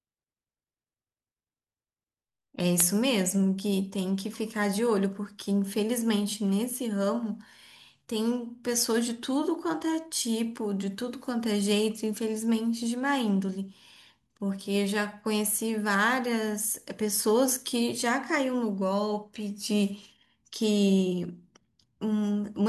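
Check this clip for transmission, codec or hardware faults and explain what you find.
Nothing stood out on listening to this speech recording; no transmission, codec or hardware problems were heard anywhere in it.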